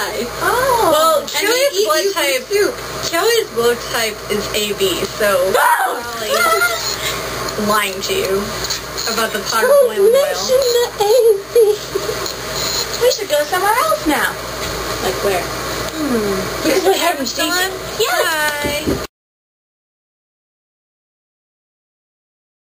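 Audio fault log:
No faults were found in this clip. Nothing in the sound calls for a time or a cause to be logged.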